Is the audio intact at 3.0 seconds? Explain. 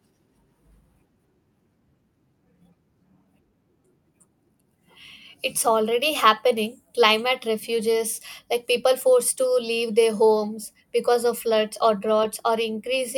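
Yes, the speech at 3.0 seconds plays through cleanly, with no dropout, click, distortion or other fault at that moment.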